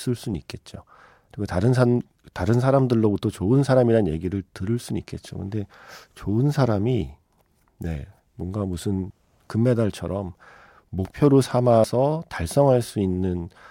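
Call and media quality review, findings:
Likely dropped buffers (overrun): capture not read before hardware overwrote samples. Speech skips ahead at 9.10, 11.05 and 11.84 s, briefly losing audio, most at 9.10 s.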